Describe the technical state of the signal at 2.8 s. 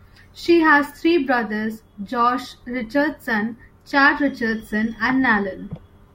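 At 2.8 s the speech signal is intact, with no audible technical fault at that point.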